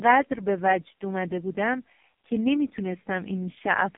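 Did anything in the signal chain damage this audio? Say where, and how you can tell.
Yes, at the codec stage, right through the clip: it's the AMR narrowband mobile codec. Nothing gets past 3.6 kHz, the band sits at 150 Hz to 3.5 kHz, and heavy buzzy, synthetic damage fits AMR-NB's lowest 4.75 kbps mode.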